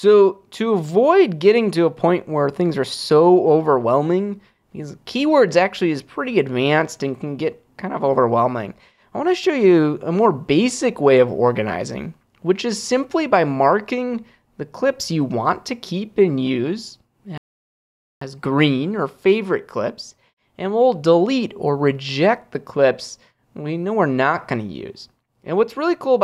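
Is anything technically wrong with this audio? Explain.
Yes. A playback stall occurs from 17.38 to 18.21 s. The sound stops mid-flow and goes silent for about 0.84 s, then resumes. The player likely ran out of buffered data or had its thread blocked, so output halted until it recovered.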